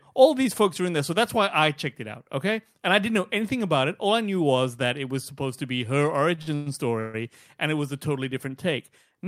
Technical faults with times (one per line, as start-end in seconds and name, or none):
6.35-7.16 repeated stalls (stutter)